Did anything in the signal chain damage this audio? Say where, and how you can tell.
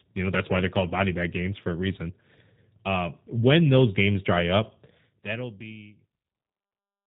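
Yes, at the codec stage: the whole speech clip carries plainly audible G.729 coding, with nothing above 4 kHz, and a rough, slightly synthetic texture that fits an 8 kbit/s stream. Unlike simple band-limiting, the speech is rebuilt from a vocal-tract filter and sparse pulses, which adds that buzzy roughness. The smooth fade-out from about 5 s to the end is an intended edit, not damage.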